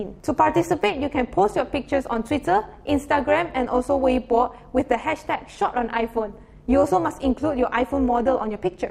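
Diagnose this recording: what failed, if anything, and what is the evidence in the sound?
Overlap-add ripple throughout the clip: a processing stage rebuilt the audio from windowed frames that don't sum evenly, so the level pulses about 11 dB around 200 times a second, a metallic buzz.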